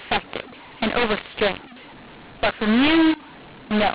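Speech over G.711 telephone coding at 8 kHz, with a mu-law and A-law mix-up throughout: mu-law samples decoded as A-law scramble levels, making it harsh and filling pauses with noise.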